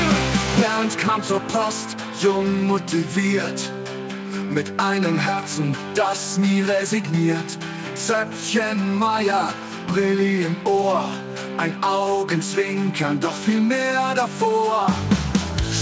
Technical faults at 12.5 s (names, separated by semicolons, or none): none